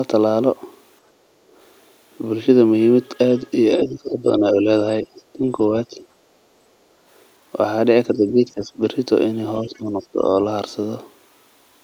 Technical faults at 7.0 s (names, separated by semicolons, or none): background gated by the echo canceller